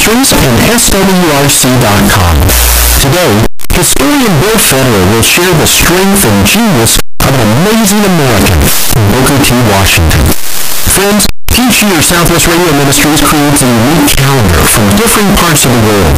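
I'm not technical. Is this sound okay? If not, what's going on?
No. The speech is buried under very loud, harsh distortion from start to finish. Quiet moments are just as loud as everything else, so there is no calm between phrases. The likely cause is signed and unsigned mixed up. The audio was stored one way and read back the other. Every time the waveform passes through silence, it jumps from one extreme to the other. Those constant jumps make the roaring, crackling noise.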